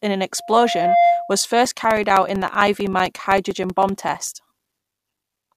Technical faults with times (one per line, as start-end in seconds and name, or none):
0.37-1.46 loudspeaker feedback squeal
1.65-5.49 periodic USB or driver dropouts